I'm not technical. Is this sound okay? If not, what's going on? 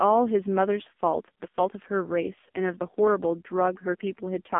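No. The speech has passed through an AMR narrowband mobile codec, the squeezed speech format used on older mobile phone calls, and it affects the clip from the first second to the last. Everything above about 3.6 kHz is gone, so the voice sounds boxed-in and thin, like a call on an old phone line. The damage is heavy: the codec rebuilds the voice from a rough model of the mouth and throat, so it comes out buzzy and synthetic.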